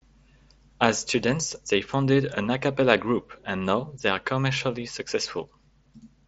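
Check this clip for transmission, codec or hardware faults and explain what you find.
Nothing in this speech clip points to a transmission, codec or hardware fault. It carries the sound of a Bluetooth mSBC headset link working as intended, with nothing above about 7.7 kHz and only a light graininess from the codec.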